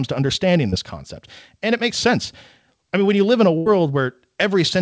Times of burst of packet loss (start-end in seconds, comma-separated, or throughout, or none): 3.58-3.68